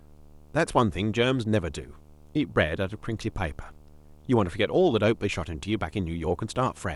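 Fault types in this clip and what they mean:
Video or display buzz: running the whole length of this speech clip is a steady buzz at 75 Hz, the field rate of a display refreshing 75 times a second, with a harsh hash riding above it. Interference from a screen or its video cable has coupled into the audio path, so the picture's scanning rhythm turns into sound. It sits roughly 30 dB below the speech.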